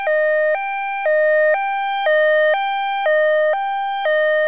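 No technical faults can be heard anywhere here.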